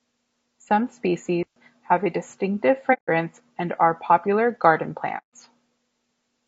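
Across the whole speech clip the voice sounds rough and grainy. Noise fills the gaps between harmonics, and the top band sounds thin and synthetic. This is likely low-delay AAC compression, AAC-ELD, at a low bitrate around 32 kbps. Its short frames resolve pitch harmonics poorly.

At 1.43 s a digital wireless dropout cuts in. The link lost too much data, so the receiver muted for about 0.13 s, until 1.56 s. It leaves a clean hole of near silence with no noise burst. Speech resumes on "have a distinctive".

Two AAC frame losses with muting follow. The decoder zeroed the spectrum of lost frames, and overlapping windows fade the sound out and back in. The first runs from 2.93 to 3.08 s, after "have a distinctive". The second runs from 5.18 to 5.28 s, after "and are popular garden". Each is a soft-edged hole, and each fits about five lost frames.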